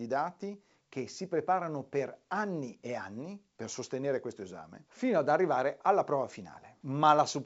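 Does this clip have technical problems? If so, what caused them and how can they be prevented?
No, the G.722 wideband coding sounds as expected here.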